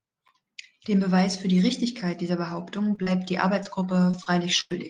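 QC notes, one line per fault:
2.95–4.74 s, repeated packet loss (robotic sound): six dropouts hit the speech in quick succession, the longest 94 ms, with about 200 ms missing in total. Each hole is patched by extending the preceding sound, so this stretch turns choppy, with pieces missing.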